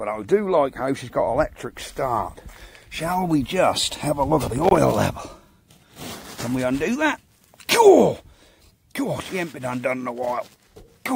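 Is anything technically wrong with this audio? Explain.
Yes. From 4.56 to 4.78 s there is a burst of loose connector crackle. A worn or dirty contact is rapidly making and breaking, chopping the signal and popping from any DC on the line. Its irregular scratchy cluster, rather than isolated evenly spaced clicks, separates it from digital dropouts.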